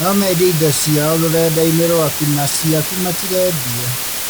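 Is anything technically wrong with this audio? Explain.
Yes. Throughout the speech there is low bit depth with dither, a heavy case. The signal is quantised to very few levels, consistent with roughly 3 bits. Random dither is added before rounding, which turns the coarse rounding error into steady white noise instead of distortion that follows the signal. The result is a constant, even hiss from start to finish, sitting only a little below the speech itself.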